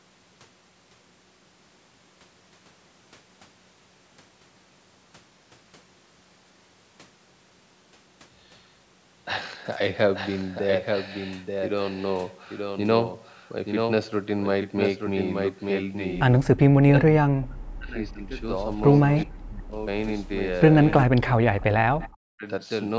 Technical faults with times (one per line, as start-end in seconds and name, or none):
0.00-22.98 doubled audio track
16.44-16.48 echo leak
16.54-18.46 speech suppressed in double talk
19.11-19.21 echo leak
19.25-19.79 speech suppressed in double talk
21.06-22.47 speech suppressed in double talk
22.01-22.17 echo leak